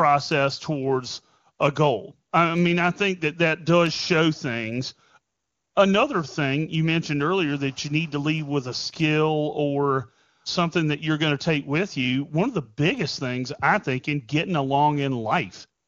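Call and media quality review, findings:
No faults found: the speech runs through the AMR wideband (HD Voice) path at 23.85 kbit/s with at most faint coding damage, and no dropouts, clipping or other technical defects are audible.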